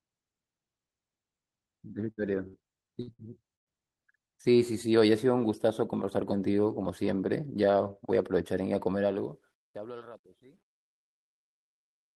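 Five bursts of packet loss hit the speech, at 2.11, 2.47, 3.01, 3.13 and 3.55 s. Each time, the receiver extends the last sound and turns it down. About 60 ms goes missing in each of the first four, and about 120 ms in the last, which drops to silence.

From 8.91 s the fade-out, which starts around 9 s, shows truncation distortion. The level steps are too coarse, fitting 11-bit resolution with no dither. As the level sinks, the tail turns gritty. From 10.04 s it is worst.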